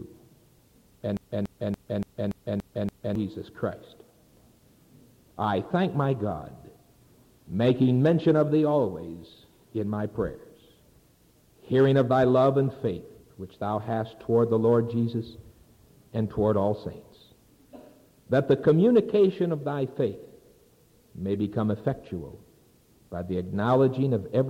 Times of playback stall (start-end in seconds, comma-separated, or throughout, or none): none